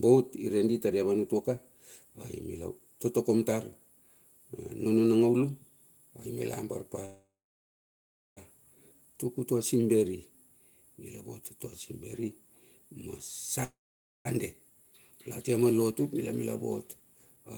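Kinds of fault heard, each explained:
Call audio freeze: speech stalls twice, for 1.31 s and 0.61 s, the last sound fading to silence, likely as late packets drained the jitter buffer; nothing's lost.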